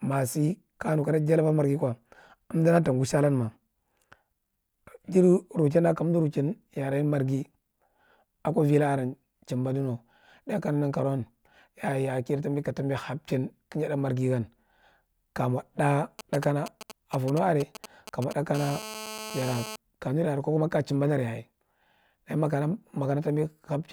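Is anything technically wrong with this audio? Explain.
Yes, two related faults interrupt the speech. From 16.19 to 18.56 s, just after "ka mo", GSM signalling bursts appear: a nearby 2G phone's intermittent radio bursts get rectified by the audio circuit into a galloping dit-dit-dit of brief 217 Hz buzzes, roughly 15 dB below the speech. A spectrogram shows them as clustered vertical stripes with a harmonic comb.

From 18.56 to 19.76 s this becomes a steady GSM phone buzz as the phone enters a call, transmitting 217 times a second. Rectification yields a hard, raspy 217 Hz buzz about 12 dB below the speech, seen as evenly spaced harmonic lines on a spectrogram and a regular pulse train in the waveform.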